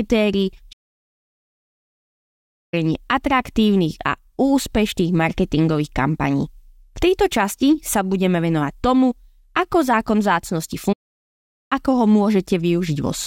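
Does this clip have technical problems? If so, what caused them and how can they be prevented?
Yes. The speech halts twice in playback stalls. Output goes silent from 0.72 to 2.74 s, about 2 s, then resumes. It stops again from 10.92 to 11.73 s, about 0.78 s. The player likely ran out of data or had its thread blocked. A deeper playback buffer and a playback thread kept free of blocking work prevent this.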